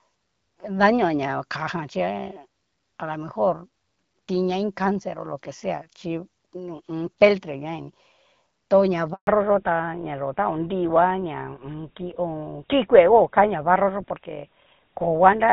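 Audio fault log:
9.13 to 9.27 s, handover gap: Just after "tu na", the call was handed from one network to another and no speech frames came through while the link changed over. The sound fades out within a few tens of milliseconds and stays silent for about 140 ms until the new connection starts carrying audio. Whatever was said in that window never reached the far end, so a short piece of the speech is simply missing.
9.27 s to the end, fallback to narrowband: Once the handover completes, the call drops from HD Voice to an older narrowband codec. Before this point the AMR wideband (HD Voice) codec carries the speech with only light coding damage, in a way that fits its 12.65 kbit/s mode. From here on nothing above 4 kHz survives, which fits GSM full rate. Without that upper band, the voice sounds duller, boxier and rougher for the rest of the clip.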